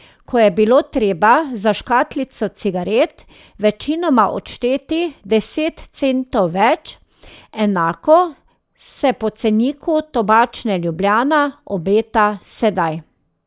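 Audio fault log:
No faults are audible anywhere in the speech.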